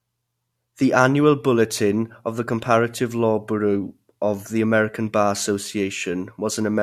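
Nothing in the recording stood out as a technical fault on listening.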